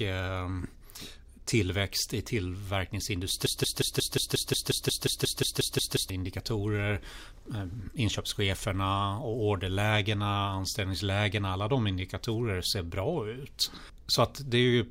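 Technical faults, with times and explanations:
3.46 to 6.10 s, broken-record loop: the player or stream likely stalled and kept sending the last fragment it still held, so one 179 ms slice of speech plays 15 times back to back. Because every copy is identical and joined end to end, the speech turns into a rigid, mechanical stutter at about 5.6 repeats per second. The speech that belonged in that 2.6-second stretch never plays, and the clip resumes after the gap.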